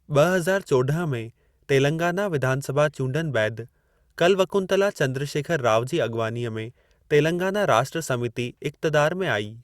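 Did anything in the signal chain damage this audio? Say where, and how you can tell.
No, nothing in this speech recording stood out as damage from any stage of the signal chain on listening.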